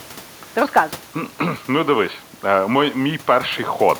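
No technical faults can be heard anywhere in this speech clip. The only background is the room noise around the microphone, which sits well below the speech, about 46 dB down for one part and about 25 dB down for the other, and is part of the recording itself.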